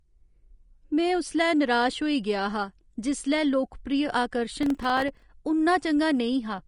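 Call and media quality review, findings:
Treble is band-limited throughout, with nothing above 10.5 kHz. The top end sounds grainy and hissy, and consonant attacks are smeared. This is likely Vorbis compression at a low bitrate; by ear it sounds near 34 kbps. Coarse residue quantisation turns high-frequency detail into noise. On a spectrogram there is a hard ceiling at 10.5 kHz, with a speckled texture below it.

Processor overload crackle from 4.63 to 5.22 s is heard as a burst of gritty tearing over the speech. Audio buffers missed their deadlines, and each miss left a brief hole of silence. This points to buffers of about 1.5 ms, with roughly twenty misses. On the waveform these show as clustered hard-edged dropouts. On the spectrogram they appear as vertical broadband streaks.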